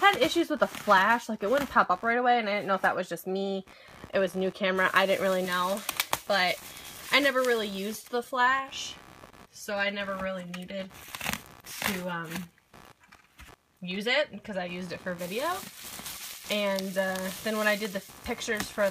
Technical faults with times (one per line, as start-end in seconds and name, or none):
0.00-18.90 computer activity noise